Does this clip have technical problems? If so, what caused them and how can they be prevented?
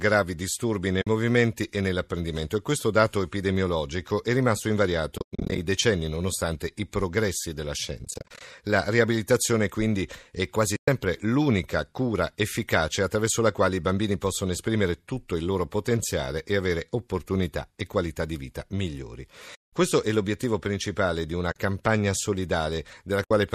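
Yes, there's AAC frame loss with muting, seven times: 1.02 to 1.07 s (after "disturbi nei", before "e nell'apprendimento e questo"), 10.76 to 10.88 s, 19.55 to 19.73 s (after "qualità di vita migliori"), 21.52 to 21.56 s (after "l'obiettivo principale di una"), and 23.24 to 23.31 s. There are also two choppy stretches at 5.18 to 5.58 s and 7.99 to 8.41 s, where scattered dropouts add up to 280 ms and 230 ms. The longest gap in the first is about a tenth of a second, and the second is all short bursts. Each time, the decoder zeroed the missing frames, so the overlapping windows fade the sound out and back in. That gives soft-edged holes. The gap sizes fit roughly 10 ms frames, which is likely low-delay AAC-ELD. That codec itself is only lightly colouring the sound. To prevent it, add forward error correction or packet redundancy plus a deeper jitter buffer, or have the decoder conceal lost frames instead of muting them.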